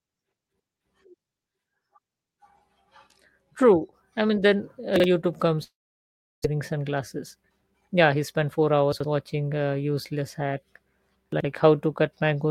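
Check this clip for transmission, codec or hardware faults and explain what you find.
Three kinds of fault turn up: a few spots where chunks play out of order, one long dropout, and a stretch where the audio is sped up to catch up.

Chunks out of order, at 4.96 to 5.04 s (right after "I mean then uh"), 8.93 to 9.04 s (just before "watching a useless hack") and 11.33 to 11.44 s. A 40 ms chunk of audio got played late, one chunk behind in the first case and two behind in the others. Nothing goes missing, but the sound is reshuffled with hard joins, so you hear a short jumbled stutter.

Long network dropout, from 5.63 to 6.46 s. The sound stops and what's left is smeared out as a buzzy, fading continuation of the last bit of audio. That dies into silence, with the gap lasting around 0.7 s. When the audio returns, about 0.6 s of material is simply gone. That pattern points to a likely stall in the network feed. 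The receiver also seems to have gained roughly 0.2 s of extra delay here.

Jitter buffer speed-up, from 6.54 to 8.49 s. After the dropout the receiver held more buffered audio than it wanted. To catch up, it snipped out many tiny pitch-period slices, around 0.2 s in total. Playback runs at about 109% speed while the pitch stays put, so this stretch sounds a bit rushed.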